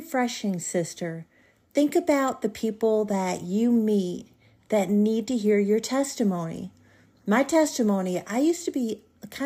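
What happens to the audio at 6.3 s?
Nothing goes wrong at 6.3 s: the speech carries on intact there, with no dropout, click or distortion at that point.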